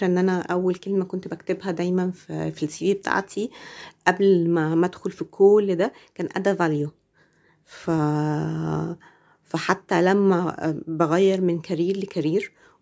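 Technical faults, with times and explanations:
No technical faults can be heard in the speech, which carries the ordinary marks of call microphone processing: the lowest bass is trimmed by its high-pass filter and nothing is present above 8 kHz.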